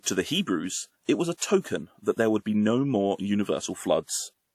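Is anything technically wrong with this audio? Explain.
Yes. Pre-echo appears at about 1.37 to 1.41 s, just after "it was a": a short hiss of roughly 39 ms runs ahead of a sharp onset, and the attack itself sounds softened. A transform codec sized its quantisation noise for that loud attack and spread it across the whole block, so the quiet stretch before the onset fills with noise. Unlike a click or distortion, the noise comes before the transient rather than on or after it.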